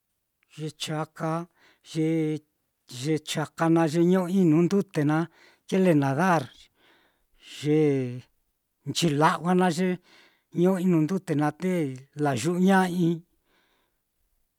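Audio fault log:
Nothing in this speech recording calls for a note, so the log stays empty.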